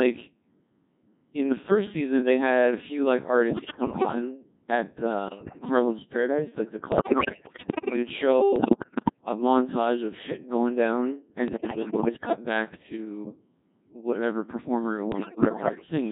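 Robotic, buzzy speech runs through the whole recording, with a synthetic, sine-built tone and no natural waveform detail. That is the Codec 2 vocoder, heavily degrading the voice at a very low rate that fits its 1.6 kbit/s mode, carrying only pitch, voicing, energy and a coarse spectral envelope. On top of that, bursts of bleeps, warbles and sudden jumps in pitch, level and timbre hit at 3.49–4.15 s (right after "had a few like"), 5.28–5.65 s, 6.92–7.96 s (after "like the"), 8.56–9.21 s (just before "a montage of shit"), 11.48–12.36 s and 15.12–15.86 s. These are bit errors on digital voice radio. Roughly one bit in ten or more arrives flipped, so whole frames are rebuilt with wrong parameters.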